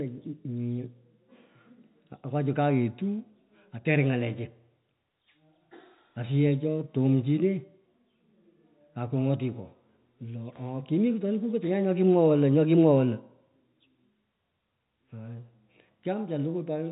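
No technical faults are audible.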